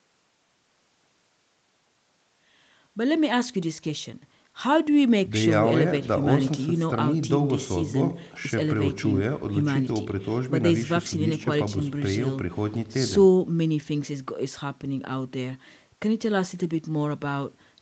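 Nothing stood out on listening to this speech; the gentle fade-in that finishes by about 3.6 s and the call-style microphone processing, with no content above 8 kHz, are both as expected.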